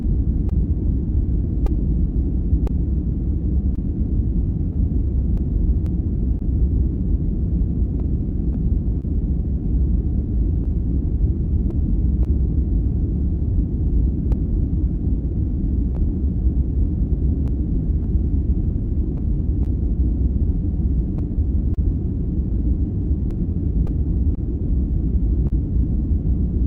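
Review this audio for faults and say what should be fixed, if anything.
Clock drift between sender and receiver runs throughout: the sender's clock is about 2 percent slow, so the jitter buffer keeps draining. On a waveform, this shows as small, irregular seams. Prevent it by using adaptive resampling that tracks and compensates the clock-rate mismatch.

Scattered short gaps appear from 0.02 to 12.27 s (about fifteen, the longest around 30 ms) and from 14.32 to 25.52 s (about ten, the longest around 40 ms). Concealment extended the preceding sound into each hole, which shows as brief smeared, flattened patches on the spectrogram. Prevent them with forward error correction or a slightly deeper jitter buffer on the lossy link.

Repeated timing corrections run from 1.22 to 20.85 s, repeating short pieces that add roughly 100 ms in total. They appear as duplicated waveform fragments at uneven spacing. 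Prevent them by fixing the drift upstream so the buffer needs fewer corrective stretches.

The Opus call path caps content near 8 kHz on the spectrogram.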